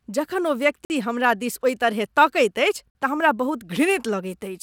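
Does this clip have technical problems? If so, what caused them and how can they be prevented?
Yes. The speech has a gap between chunks at 0.85 to 0.90 s and again at 2.90 to 2.95 s. Each is a 50 ms hole with hard edges, and they repeat 2 s apart because silence is inserted at each join between 2-second chunks. On a waveform these show as flat near-silent stretches with abrupt boundaries, and on a spectrogram as narrow, nearly blank vertical columns. To prevent it, strip codec padding and schedule each chunk to start exactly where the previous one ends.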